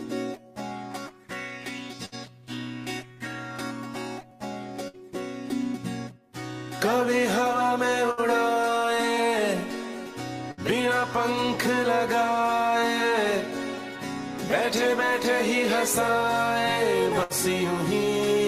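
Bursts of packet loss occur at 2.05, 4.88, 8.11, 10.51 and 17.23 s. Each time, about 60 ms of sound drops out. The receiver stretches the last sound into a fading buzz or hiss, then jumps ahead.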